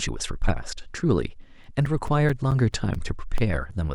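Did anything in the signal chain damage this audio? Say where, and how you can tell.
Yes: CD scratch ticks at playback, eleven regular ticks, about five per second, between 1.20 and 3.38 s. Each disc turn loses unrecoverable samples, showing as evenly spaced thin vertical spectrogram lines.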